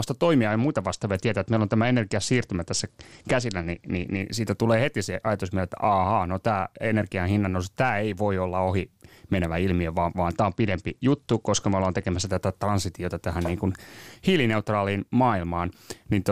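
From about 0.49 to 4.21 s, just before "siitä tulee heti se", the speech goes dull and gritty: that's a Bluetooth SBC bit pool drop. The link got squeezed, so the encoder starved the top sub-bands and quantised the rest coarsely, which fits a fall from bit pool 31 to 11, around 83 kbps. It happens again from 10.35 to 12.31 s, between "menevä ilmiö vaan vaan" and "tätä transitiota tähän niin", clearing once the rate recovers.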